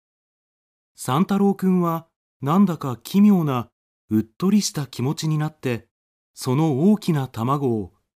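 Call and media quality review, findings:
No call or media quality faults found in this speech clip.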